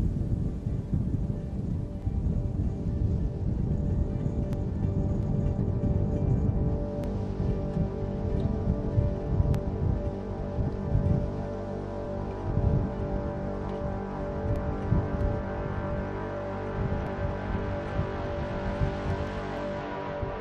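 Overlapping chunks put a brief repeat at 2.02, 4.53, 7.04, 9.55, 12.05, 14.56, 17.07 and 19.57 s. Each 2.5 s block restarts about 7 ms early, so that sliver plays twice as a regular click. The waveform shows a small discontinuity there, and the spectrogram a thin vertical broadband line.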